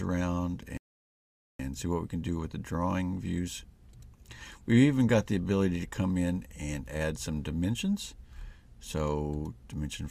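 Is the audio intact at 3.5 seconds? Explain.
Yes, the audio is intact at 3.5 seconds, with no fault to be heard at that point.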